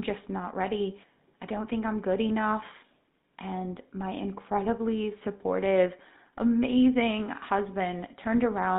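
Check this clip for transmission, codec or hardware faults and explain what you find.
One codec fault runs through the whole clip. Throughout, the speech sounds buzzy and gravelly, confined to about 150 Hz to 3.7 kHz, which fits the GSM full-rate codec at 13 kbit/s: a coarse pulse-train excitation drives a vocal-tract model.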